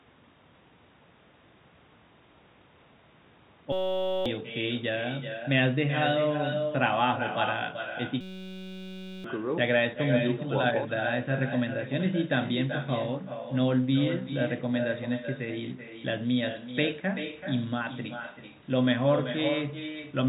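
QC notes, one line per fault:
Throughout: echo with no canceller. Every phrase of speech is trailed about 0.4 s later by a quieter, thinner copy, at about 8 dB below the talker. The far end's loudspeaker is feeding its microphone, and with nothing cancelling it, the voice returns after the network round trip.
3.72–4.26 s and 8.21–9.24 s: system hang loop. The speech is replaced by a steady buzz at 188 Hz, lasting 0.53 s and then 1.04 s. The playback froze while the hardware kept cycling one 5.33 ms slice of audio, which fits a 256-sample buffer, so roughly half a second and then about a second of speech is lost.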